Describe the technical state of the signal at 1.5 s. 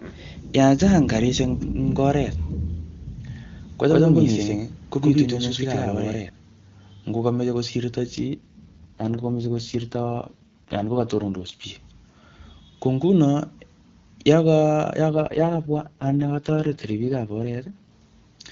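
At 1.5 s the speech is intact, with no fault present, and the AMR wideband (HD Voice) codec carrying it is running at 23.85 kbit/s, where its coding leaves at most faint traces.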